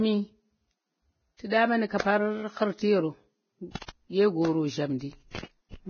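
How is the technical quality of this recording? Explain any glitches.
The recording is technically poor. The speech is heavily coded throughout, and three short bursts of pre-echo come before sharp onsets.

Vorbis compression runs through the whole clip. The speech sounds hissy and grainy, with nothing above about 6.6 kHz. This is likely low-bitrate Vorbis coding, around 17 kbps. It cuts the treble and quantises the remaining detail so coarsely that it turns to noise.

Pre-echo occurs at 1.50 to 1.52 s, at 3.76 to 3.81 s, and at 3.86 s. The last two come just before "ɗye goro". The codec spreads its noise across a whole block, so the hiss belonging to a sharp attack leaks into the silence before it. Each onset is preceded by a short hiss, from 19 to 53 ms long.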